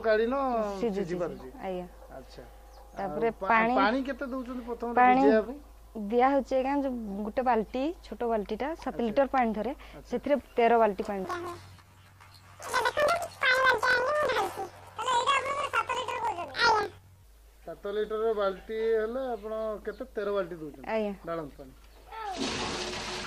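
Planar audio read as interleaved, from 11.25 to 17.25 s: each block of left then right samples is taken as alternating pairs, so every 23.22 ms block, which fits a 1024-sample buffer, plays twice at double speed, an octave high with a 43.1 Hz flutter.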